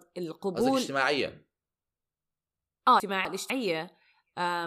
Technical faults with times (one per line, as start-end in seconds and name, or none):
3.00-3.50 chunks out of order